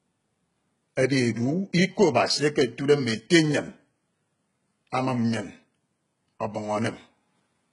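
From start to end, the speech carries heavy damage from what is likely HE-AAC compression. Only the lower spectrum is properly coded. The treble is rebuilt by copying lower bands upward under a coarse envelope. Its harmonics no longer line up with those below. So s sounds come out gritty, metallic and lispy. Nothing reaches above 11 kHz. The depth of the damage fits a very low bitrate, around 12 kbps.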